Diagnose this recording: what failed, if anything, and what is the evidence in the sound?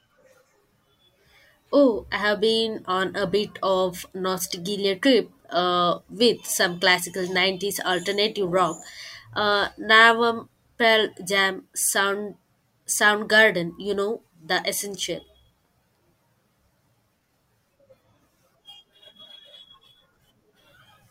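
Nothing in the signal chain has failed: the speech arrives continuous and intact, with no audible disturbance at any stage from capture through to playback.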